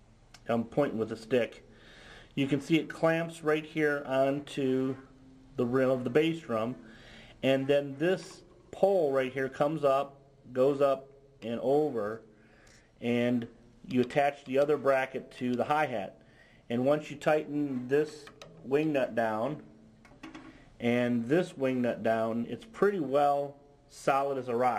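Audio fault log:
throughout: crude rate conversion. The rate was changed, which fits 48 kHz to 44.1 kHz, by taking the nearest sample with no filter. This leaves a gritty, inharmonic fizz about 30 dB below the signal that follows loud and high sounds. Unlike quantisation grit, it is built from shifted copies of the audio, set by the two rates.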